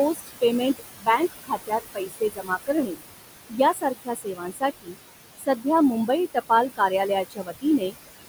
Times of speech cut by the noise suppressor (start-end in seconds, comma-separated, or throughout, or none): 0.14-0.42, 0.78-3.01, 3.49-4.99, 5.38-5.65, 6.07-6.91, 7.25-7.95